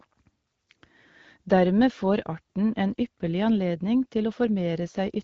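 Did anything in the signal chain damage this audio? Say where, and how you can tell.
No, the speech passes through an AMR wideband (HD Voice) coding stage whose character fits the 12.65 kbit/s mode, where intelligibility holds up and the coding leaves only a light trace, and no stage of the chain shows any damage.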